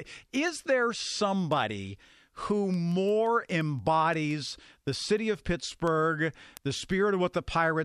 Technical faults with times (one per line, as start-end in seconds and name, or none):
0.13-7.79 word clock ticks